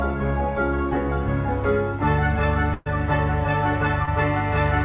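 From 1.2 s to the end, mains hum sits under the sound: a steady 50 Hz tone with low harmonics, consistent with a ground loop or nearby transformer coupling the power line into the signal. It is strong, close to the level of the wanted sound, and never lets up.

At 2.74 to 2.88 s comes a burst of packet loss. About 120 ms of audio never arrived in time, and the receiver stretched the last sound across the gap while fading it down, giving a held buzz or fading hiss. Playback then jumps ahead with that stretch missing.

At 4.06 to 4.09 s there is a short concealed packet loss. Roughly 20 ms went missing and was patched by continuing the preceding sound before blending back into the real signal, heard as a brief smear or wobble. Everything here passes through a narrowband call path with nothing above 4 kHz, which points to a G.711 A-law codec.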